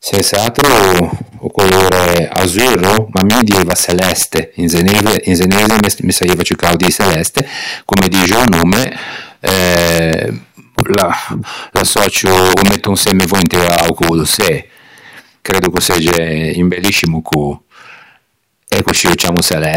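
Integer overflow runs through the whole speech clip. The loudest syllables are driven about 2 dB past the largest value the integer format can hold. Those samples do not stop at the ceiling. They wrap around to the opposite extreme. Around one percent of the samples cross that line. Each crossing jumps the full range in an instant. The result is a violent crack on every loud peak, far harsher than ordinary clipping.

At 2.07 s a sharp snap sits on top of the audio, just before "azurro ma dieiva çeleste". A second one comes at 17.06 s. Both are electrical switching spikes. They are very brief, tight bursts riding over the sound rather than part of it. The likely cause is a nearby switch, motor or static discharge arcing. The audio line picks that up as a click.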